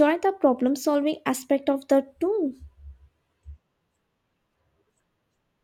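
No technical faults can be heard anywhere in this speech recording.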